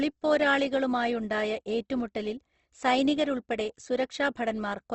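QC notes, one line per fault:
Throughout, Opus compression: the speech sounds rough, grainy and noisy, and nothing above 8.3 kHz survives. The likely cause is Opus in its music mode filling starved bands with folded or noise content, which fits a bitrate near 16 kbps.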